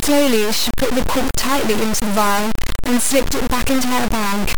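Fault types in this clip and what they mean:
Low bit depth without dither: The whole clip sounds like the speech was squeezed into only three bits and truncated, likely with no dither. Since the rounding error follows the signal instead of sitting underneath as steady hiss, you get a harsh, grainy distortion that shifts with every syllable, and it's nearly as loud as the speech. Quiet tails and soft consonants break up, sputtering between a couple of steps or dropping straight to silence.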